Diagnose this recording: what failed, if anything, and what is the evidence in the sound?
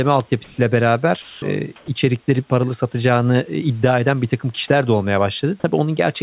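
Comfort noise in place of the background, at the call-processing stage: between 0.44 and 0.58 s the textured room background, about 30 dB below the loudest speech, turns into a smooth, even hiss at an unchanged level, likely from discontinuous transmission. On a spectrogram that stretch of the noise floor, capped at 4 kHz, goes uniform and grainless.

Sound dropped by the voice detector, also in call processing: from 1.22 to 1.42 s and from 1.76 to 1.88 s, speech is replaced by steady noise, with about 140 ms and 60 ms of it lost, likely because the detector classed that speech as background. On the waveform the speech envelope collapses to a flat noise band, then resumes abruptly.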